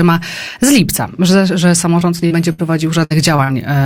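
Short concealed packet loss first appears at 1.99 to 2.03 s and again at 2.27 to 2.32 s. Twenty and then forty milliseconds of audio failed to arrive, and the receiver patched each hole by extending the preceding sound before blending back in. The result is a momentary smear or wobble rather than an obvious gap, because the patch lasts only tens of milliseconds.

Bursts of packet loss follow at 2.52 to 2.60 s and 3.04 to 3.12 s, each dropping about 60 ms in a row. What separates these from the brief smears is the longer, fading fill: the last sound is held as a buzz or hiss that sinks in level, then the audio jumps ahead with a chunk missing.

Two more short concealed losses land close together at 3.36 to 3.40 s and 3.44 to 3.50 s, losing twenty and forty milliseconds, heard as quick wobbles without the fade-and-skip of a burst.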